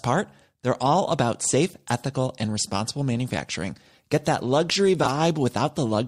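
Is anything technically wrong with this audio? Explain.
Yes. There is one fault: frames out of order. From 5.03 to 5.09 s, just after "that luxury", two neighbouring runs of frames play swapped. The halves of this short stretch are exchanged, which fits runs of two 20 ms frames. It sounds like a brief garbled flutter. No time is lost.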